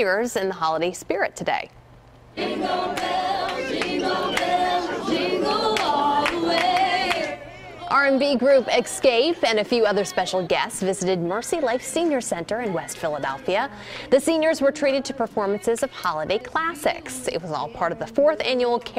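Nothing stood out as a technical fault on listening to this recording.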